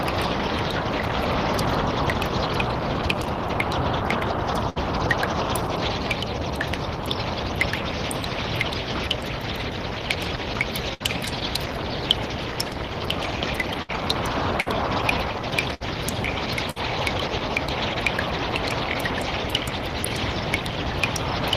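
A brief held, fading tail of sound, then a skip ahead, at 4.69, 10.94, 13.82, 14.61, 15.74 and 16.70 s. These are bursts of packet loss: the receiver extended the last sound for 55 to 65 ms while turning it down, then resumed about 60 ms further on.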